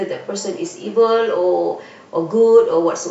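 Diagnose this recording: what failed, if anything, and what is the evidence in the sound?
Nothing failed; no stage leaves any audible trace.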